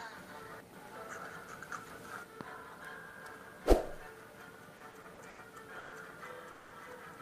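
Repeated stalls (stutter) run from 4.77 to 5.39 s: packets arrived late, so the jitter buffer emptied five times, each gap up to 90 ms filled by continuing the last sound, giving a dragging stutter. Call audio freezes at 5.79 s (130 ms) and 6.51 s (200 ms) hold the sound as a fading buzz, then resume where it stopped, likely from delayed packets draining the buffer.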